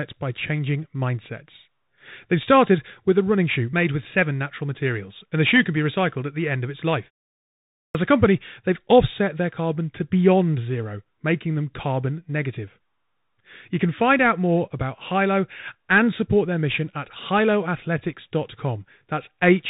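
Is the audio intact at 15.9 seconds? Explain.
No. At 15.9 s the speech is still passing through the Bluetooth CVSD headset codec, which degrades the whole clip, so the damage is present at that moment as everywhere else. CVSD encodes one bit per sample at 64 kHz, signalling only up or down with an adaptive step, so the audio is cut off at 4 kHz and sounds muffled. Fast, loud high-frequency content outruns the step size and distorts, sibilants come through scratchy, and a granular hiss sits under the speech.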